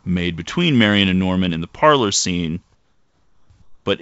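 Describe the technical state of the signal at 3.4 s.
At 3.4 s the background is comfort noise in place of the real background. It runs from 2.75 to 3.50 s, right after "in the parlor scene". A steady, featureless hiss, about 6 dB quieter, replaces the room tone. The likely cause is discontinuous transmission, with the receiver synthesising noise during the pause.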